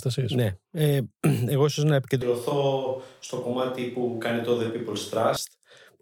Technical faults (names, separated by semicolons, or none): switch to a distant microphone